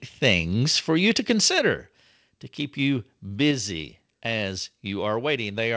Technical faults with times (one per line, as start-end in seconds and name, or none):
1.59 microphone volume stepped down
3.51 microphone volume stepped down